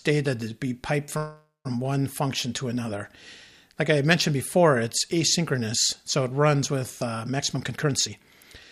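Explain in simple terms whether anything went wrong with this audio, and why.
Two things go wrong here, one near the start and one near the end.

From 1.17 to 1.67 s there's a call audio freeze. The sound stalls and the last bit gets stretched into a fading buzz that drops to silence for about the final 0.16 s. That's likely because packets got held up in transit and the receiver's buffer ran dry. When they arrived, playback picked up right where it left off, so nothing's lost, but everything after runs about half a second later.

From 7.36 to 8.21 s there's a jitter buffer speed-up. The receiver had built up more audio than it wanted, so it trimmed out lots of tiny slices to catch up, about a third of a second in total. The result plays at roughly 138% speed without changing pitch, so that stretch sounds rushed.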